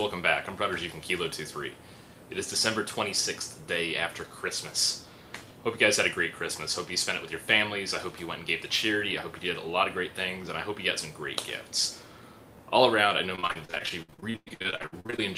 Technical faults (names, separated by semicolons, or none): repeated packet loss (robotic sound)